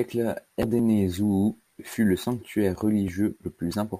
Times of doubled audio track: none

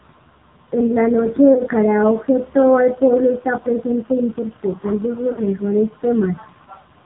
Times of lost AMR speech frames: 1.54-1.61, 5.32-5.42

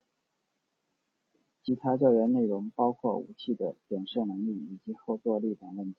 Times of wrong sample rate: none

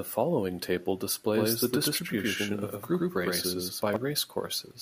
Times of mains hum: none

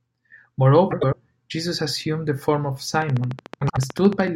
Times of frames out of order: 0.91-1.14, 3.61-3.78

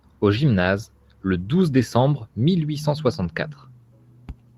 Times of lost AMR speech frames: none

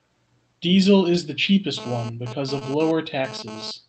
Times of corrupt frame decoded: none

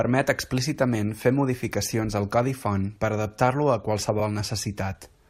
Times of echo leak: none

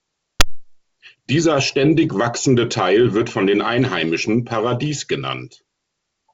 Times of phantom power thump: 0.40-0.67

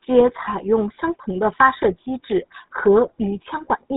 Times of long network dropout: none

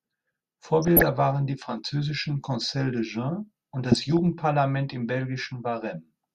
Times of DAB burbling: 0.82-1.14, 3.92-4.19

